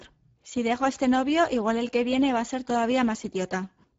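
Speex codec damage runs through the whole clip, from start to end. Speex is a CELP coder that models the voice with a vocal-tract filter driven by an excitation signal, and here too few bits go to that excitation, so the speech comes out plainly noisy and hoarse. The sound fits a bitrate near 10 kbps. Nothing is present above 7.7 kHz, and the upper band sounds like a shaped, noise-like fill rather than real detail.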